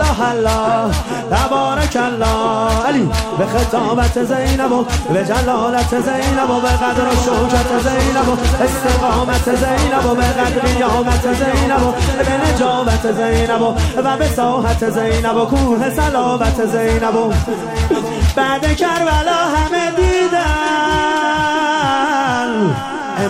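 From 6.96 to 12.58 s a doubled audio track appears: a copy about 5 dB quieter lags about 0.7 s, likely captured twice, so spectrogram patterns repeat offset.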